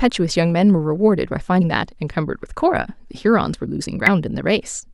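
Speech with damaged data in a compressed stream at 1.60 s and 4.07 s: corrupted frames make the decoder lose sync, giving brief glitches that show as narrow broadband streaks and waveform discontinuities.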